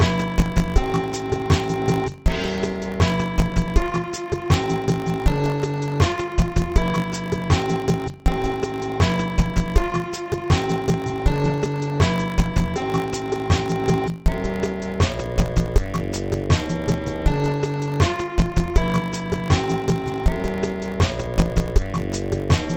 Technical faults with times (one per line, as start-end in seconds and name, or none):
0.00-22.76 interleaved audio read as planar